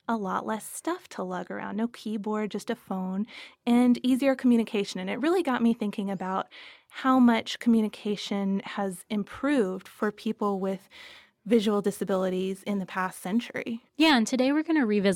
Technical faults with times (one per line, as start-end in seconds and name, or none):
9.75-14.11 crude rate conversion